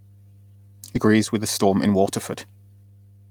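A steady low drone sits under the speech for the whole clip, a 50 Hz tone with some low harmonics, about 30 dB below the speech. This is mains hum: the power line is leaking into the signal, most plausibly through a ground loop or a nearby transformer.

From 0.95 to 0.97 s the speech jumps forward abruptly with no gap, so roughly 0.7 s of talk simply vanishes and the two sides are butted together. This is a skip ahead: a block of audio was discarded while later audio was already queued.

From 1.07 to 2.84 s the speech sounds hurried, running at about 113% speed while the pitch stays put. This is a jitter buffer speed-up: the receiver had too much audio stored and trimmed many short pitch-period slices, roughly a third of a second altogether, to catch up.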